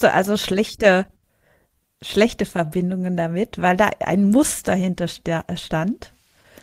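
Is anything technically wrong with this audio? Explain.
Yes. Two related timing faults affect this speech clip.

Clock drift between sender and receiver runs throughout. The sender's clock is about 2 percent slow. The receiver's jitter buffer keeps draining. The playback must stretch the sound to avoid running empty. The result is a slightly unsteady pace.

Repeated timing corrections occur from 0.21 to 5.91 s. The receiver repeats short pieces to keep in step. This plays the stretch at 98 percent speed, adding roughly a tenth of a second overall. At most, slight hiccups or an unsteady tempo are heard.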